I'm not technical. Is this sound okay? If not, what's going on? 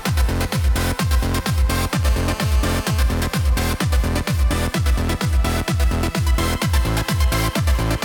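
No. From 2.03 to 3.01 s there's GSM phone buzz: a nearby mobile phone's radio pulses leak in as a steady, raspy rattle, harsher than smooth electrical hum.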